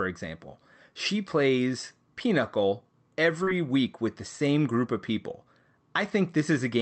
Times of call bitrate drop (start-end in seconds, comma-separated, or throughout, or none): none